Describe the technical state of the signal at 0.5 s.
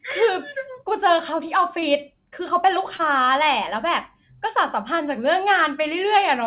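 At 0.5 s the speech is intact, with no fault present, only the ordinary narrowband character of the call path, which carries nothing above 4 kHz.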